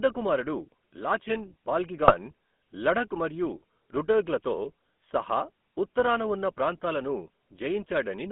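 Throughout, the speech carries the GSM full-rate codec's gravelly, buzzy roughness, which fits a 13 kbps stream. The vocal tract is rebuilt from coarse pulse excitation, so detail is lost. On a spectrogram, energy sits between about 200 Hz and 3.4 kHz, with nothing above.

From 2.02 to 2.14 s, right after "కుమారుడు లాచెన్", GSM bit errors break the audio into squawks and gargling. Corrupted filter, pitch and gain values distort each decoded frame. A spectrogram shows smeared, misshapen bands, and the waveform shows abrupt level jumps.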